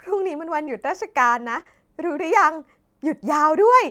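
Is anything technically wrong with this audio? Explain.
Yes. The speech carries two related transmission faults, both from packets arriving too late or not at all.

Short concealed packet loss occurs at 0.65 to 0.69 s and again at 1.63 to 1.67 s, each a hole of about 20 ms, which fits a single lost 20 ms packet. The receiver had nothing to decode, so it extended the preceding sound, pitch-continued if voiced and as shaped noise if not, then crossfaded back into real audio. Each spot is heard as a brief smear or wobble.

Lost packet rebuilt from error correction appears at 0.67 to 0.69 s, 1.55 to 1.61 s, and 1.67 to 1.69 s. The first and last spans are 20 ms each. The middle span holds 40 ms of rebuilt audio, consistent with two separate packets. Here the following packet carried a low-bitrate redundant copy of the missing one, and the decoder played that instead of leaving a gap. Those stretches sound continuous but coarser and grainier than the surrounding audio.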